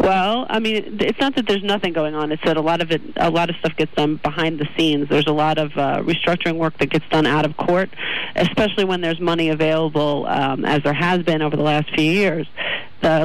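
Brittle crackle rides the loudest peaks throughout: hard clipping, with the signal driven about 4 dB past the stage's limit, so a small share of peaks are cut flat.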